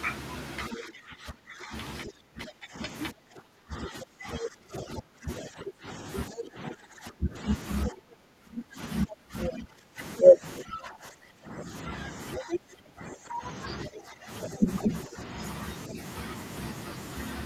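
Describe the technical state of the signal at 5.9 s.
At 5.9 s you're inside a long stretch, from 0.74 to 15.99 s, where the speech keeps getting pushed down: it dips, goes dull or breaks up, at worst by roughly 20 dB, with about ten seconds affected overall. That's speech suppressed in double talk, likely because both ends were talking at once and the echo canceller couldn't tell this talker from the loudspeaker echo, so it turned everything down.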